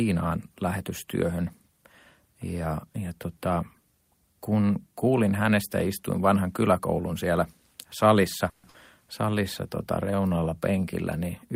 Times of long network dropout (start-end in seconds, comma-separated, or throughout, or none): 8.49-8.76